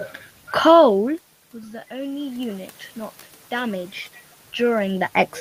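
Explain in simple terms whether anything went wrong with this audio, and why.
From 0.66 to 1.71 s there is automatic gain falling. The recorder judged the sound too loud and turned itself down slowly, so the speech and room noise sink together. From 1.67 to 2.82 s comes automatic gain rising. The input had dropped sharply, so the recorder slowly turned back up, and speech and background swell together over about a second. The level changes near 0.5 s and 4.5 s sound like the talker moving relative to the microphone.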